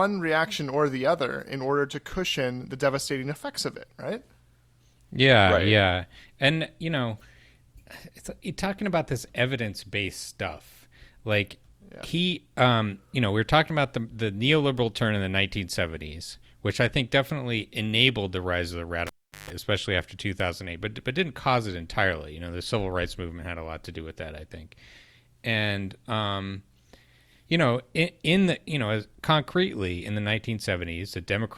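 At 19.07 s the cable gets pulled and plugged in: a pop, about 385 ms of near silence, a 154 ms burst of 50 Hz mains buzz, then another pop at 19.50 s.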